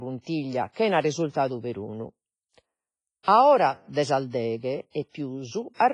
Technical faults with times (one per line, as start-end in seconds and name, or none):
0.00-5.94 WMA compression